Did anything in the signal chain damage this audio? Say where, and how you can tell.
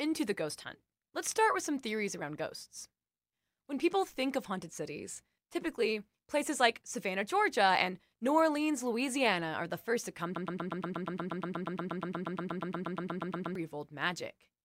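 Yes. Right after "the first to come", from 10.36 s to 13.55 s, a 119 ms fragment of speech repeats back to back 27 times, a classic broken-record loop. Likely a playback or stream stall re-sending its last buffer, so the speech that belonged in those three seconds is gone.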